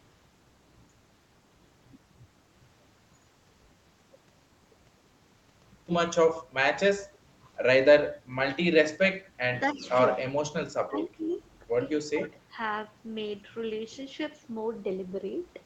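The speech dips and thins in brief stretches at 8.31–8.36 s, 8.91–9.45 s (the deepest, roughly 30 dB), 9.74–9.89 s, 10.87–11.34 s and 12.14–12.58 s. This is speech suppressed in double talk, likely an echo canceller turning down the near talker while the far side speaks. Inside the 10.87 s dip, from 11.04 to 11.31 s, a faint copy of the sound trails 267 ms behind. This is an echo leak, likely loudspeaker pickup the canceller failed to remove.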